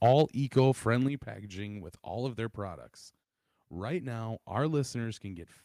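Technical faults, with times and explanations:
0.05 to 0.22 s, microphone overload: input gain was likely set too high, driving peaks about 3 dB past the converter's ceiling, so a few percent of samples are flattened, giving a harsh crackle.
0.07 s, microphone volume stepped down: the call software likely cut the device's input gain in a single step of about 3 dB, so voice and background drop together.
0.57 to 0.69 s, microphone overload: peaks likely ran about 4 dB past the converter's limit, their tops squared off on a few percent of samples, adding a gritty, crackling edge.
1.08 s, microphone volume stepped down: a second abrupt input-gain cut of about 7 dB, likely triggered by the earlier clipping, makes the level fall sharply in one step.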